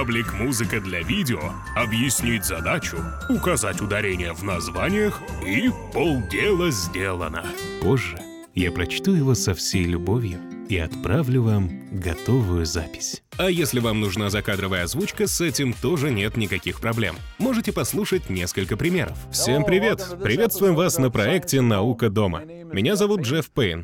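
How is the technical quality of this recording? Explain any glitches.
There is one glitch: a bit error spike at 8.17 s. A single sample jumps to about -12 dBFS and returns immediately, consistent with one flipped bit in memory or on a digital link. It produces one sharp, broadband tick with no relationship to the surrounding audio.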